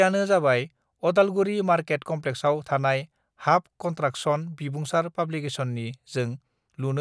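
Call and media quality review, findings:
No audible faults in speech audio; nothing to escalate.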